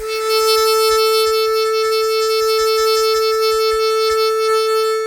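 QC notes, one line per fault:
1.12–3.84 s, clock slip clicks: around three faint ticks in the music, roughly one and a half seconds apart. Each is a single sample dropped or repeated, likely because two unsynchronised devices drift by around 15 ppm until the error reaches a whole sample.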